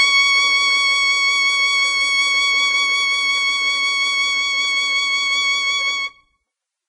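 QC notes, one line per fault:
Throughout: transcoding between lossy codecs, likely. The music has nothing above 10.2 kHz. Stacked swirly, smeared artefacts suggest low-bitrate Vorbis, then MP3, then WMA.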